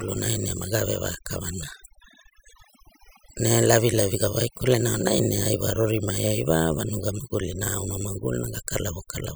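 Overdone noise removal runs through the whole speech clip: an over-aggressive reducer cuts any band near its noise estimate, leaving near-silent gaps with twinkling specks. A spectrogram shows ragged, patchy harmonics scattered with isolated bright dots between phrases.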